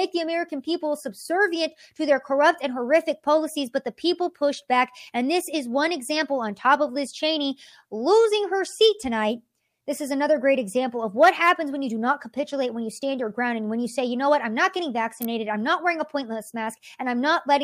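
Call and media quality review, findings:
Electrical switching spike, 15.22–15.25 s: sharp snap over speech, peaking around -10 dBFS. Waveform shows a narrow vertical burst; spectrogram a thin full-band stripe. Likely a nearby switch arc coupling into the line.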